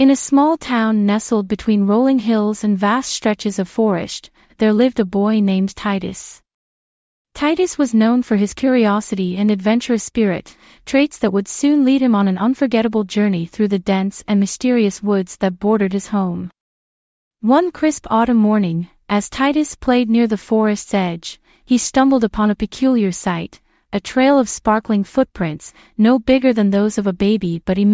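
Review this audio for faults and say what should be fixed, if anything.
Review found no faults in this audio, so nothing needs to be fixed.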